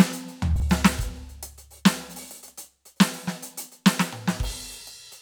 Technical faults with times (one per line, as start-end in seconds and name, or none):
0.56-0.62 chunks out of order